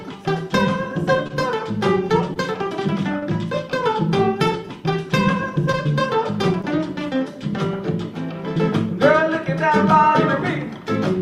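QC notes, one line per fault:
1.27–1.31, 2.33–2.37, 3.19–3.24, 5.72–5.75, 6.61–6.65 s, short concealed packet loss: about 20 ms arrived too late each time. The receiver extended the preceding sound to fill the gap, leaving a brief smear or wobble.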